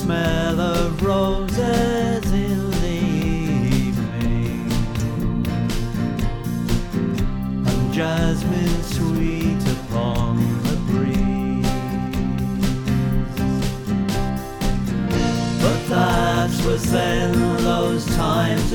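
Nothing goes wrong anywhere in this audio, so there's no technical fault to point to at any moment.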